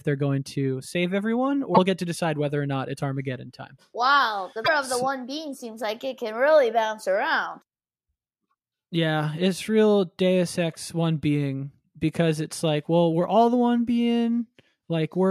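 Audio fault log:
1.71–1.78 s and 4.61–4.68 s, damaged data in a compressed stream: two 70 ms glitches, the first between "going to save everyone" and "get to decide whether", the second just before "of the so one". Corrupted bytes make the decoder misread frames, lose sync and hunt for the next frame header, so the audio there comes out garbled. The waveform has an abrupt discontinuity at each edge.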